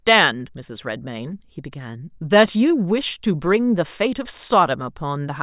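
No technical faults can be heard anywhere in this speech recording. Nothing in the signal path gives reason for comment.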